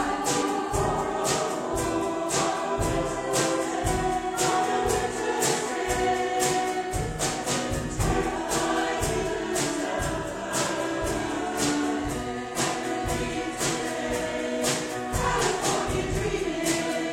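Damaged data in a compressed stream appears at 0.42 s, then for about 50 ms each at 5.67–5.72, 9.80–9.86, 12.50–12.55 and 15.38–15.43 s: corrupted bytes derail the decoder, which loses frame sync and glitches briefly while hunting the next header.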